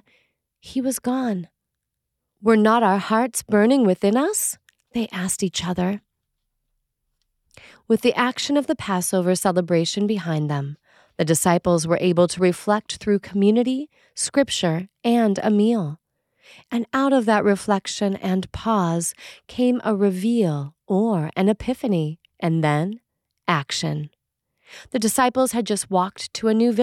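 No technical faults are audible.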